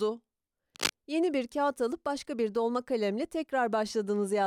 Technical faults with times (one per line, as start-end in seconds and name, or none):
0.75-0.92 cable scratch noise